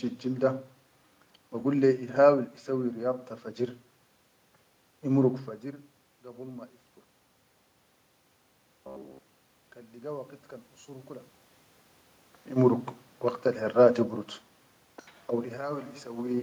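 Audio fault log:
8.51–9.59 s, robotic sound from repeated short buffers: the speech turns into a rigid metallic buzz at 66.8 Hz, likely because audio arrived too seldom and a roughly 15 ms fragment was looped over most of this stretch.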